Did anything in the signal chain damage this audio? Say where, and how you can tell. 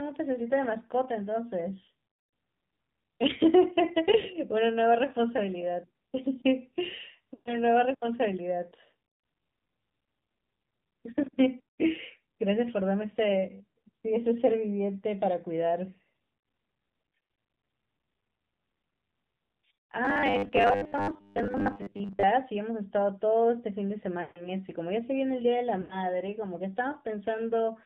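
Yes. At the codec stage, the whole clip went through the AMR narrowband mobile codec at 7.4 kbps, a low rate for AMR-NB. Nothing above 4 kHz survives, and the speech has a plainly audible buzzy, synthetic quality from the pulse-driven vocal-tract model running short of bits.

On the network or radio side, lost AMR speech frames appear at 4.20 s, 7.34 to 7.58 s, 24.22 to 24.51 s and 25.82 to 26.07 s. The gap at 4.20 s lasts 40 ms, about two 20 ms frames, and gives a brief dip. The longer runs smear and fade because the decoder keeps reusing its last pitch and vocal-tract settings while lowering the gain.

From 20.05 to 22.25 s the speech turns into a rigid metallic buzz at 100 Hz that still roughly follows the speech. The likely cause is a starved driver or playback buffer repeating its last 10 ms chunk in place of fresh audio, with roughly half the sound skipped.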